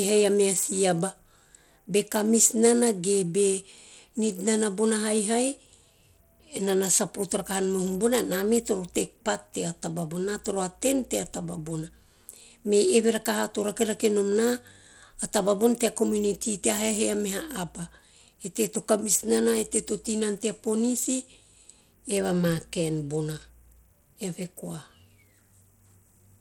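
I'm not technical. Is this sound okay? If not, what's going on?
No, not quite. All the way through, the speech has a gritty, plainly scratchy edge, and the crisp top end comes across thin and wavery instead of clean. That's the signature of Bluetooth SBC compression, likely from the audio passing through a Bluetooth link. The codec splits the sound into a few broad frequency slices and squeezes them hard, so the upper detail gets starved and a rough grain rides along on top.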